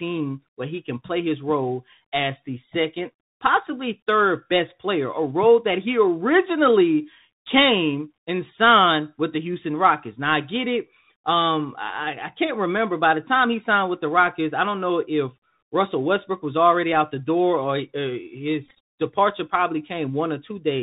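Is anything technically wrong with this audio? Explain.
Yes. The whole clip runs through the Bluetooth CVSD headset codec, and there is a burst of Bluetooth headset packet repeats near the end.

Throughout, the speech is narrowband. Nothing passes above 4 kHz. CVSD sends one bit per sample, up or down, with an adapting step, which fits a 64 kbit/s stream. Loud high sounds outrun the step and distort. S sounds turn scratchy. A granular hiss sits underneath.

From 18.66 to 18.78 s, packets were lost and the headset repeated the previous packet's audio. The losses total about 75 ms, scattered in short runs, the longest about 15 ms. Within a run the repeat comes every 3.75 ms, giving a brief buzz near 267 Hz.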